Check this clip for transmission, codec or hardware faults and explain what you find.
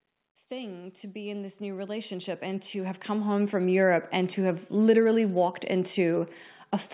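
One fault stands out: automatic gain rising. From 0.48 to 4.71 s, the call's gain control judged the input too quiet. It raised the level by about 17 dB. Speech and background swell together until just before "literally walked." Throughout, nothing is heard above 4 kHz, which fits G.711 mu-law telephone coding.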